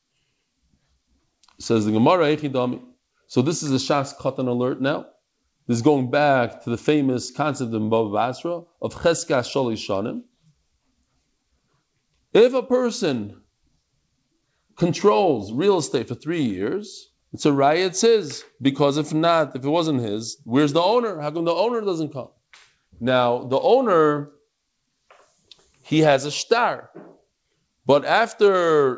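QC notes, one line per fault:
No faults to note; the speech came through a call path that carries nothing above 8 kHz.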